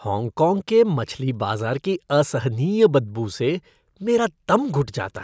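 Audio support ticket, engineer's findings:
No faults found on listening to the speech clip. Nothing to trace to any component in the chain.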